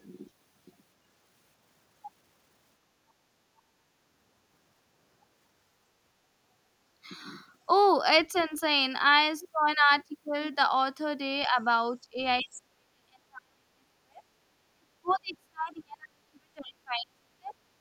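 An echo canceller likely struggling with both sides talking at once suppresses the speech from 8.32 to 8.52 s, briefly pulling it down by about 15 dB. At 8.38 s, some of the other side's voice leaks through, faint at about 30 dB below the speech. A similar faint leak at 11.43 s runs straight into more speech suppressed in double talk. The speech dips slightly at 11.48 s, by about 20 dB at 12.1 s, and then from 12.41 to 17.55 s it is held down by as much as about 40 dB, leaving it sunken and broken for five seconds.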